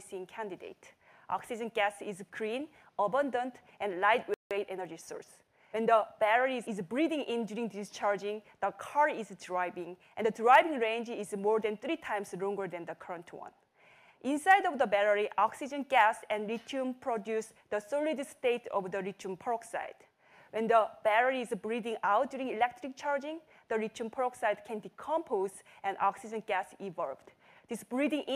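At 4.34 s the sound cuts out mid-flow. This is a playback stall lasting about 170 ms, until 4.51 s. The likely cause is the player running short of data or its thread being blocked. Output simply goes silent, then resumes.

From 4.51 s to 6.19 s comes time-compressed catch-up. The player trims its backlog by dropping small slices and cross-fading the joins. The result runs 1.1 times faster at unchanged pitch. It sounds slightly hurried.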